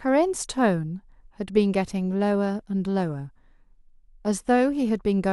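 No audible faults turn up anywhere in the recording, with no dropouts, clicks, clipping or glitches to report.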